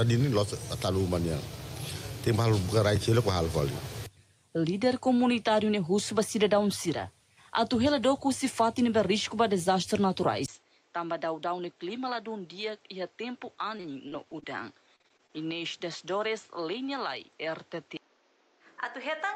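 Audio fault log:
10.46–19.35 s, input switched to a poorer device: after a 20 ms silence the sound turns boxy and dull, with nothing above 7.7 kHz, about 10 dB quieter, and carries a new noise floor. This is likely a microphone change, and the steady change in tone tells it apart from a brief dropout.
13.77–14.44 s and 14.96–15.31 s, repeated packet loss (robotic sound): short holes, the longest 42 ms, are patched by stretching the preceding sound. This gives a choppy texture with pieces missing, unlike the steady dullness of the device change.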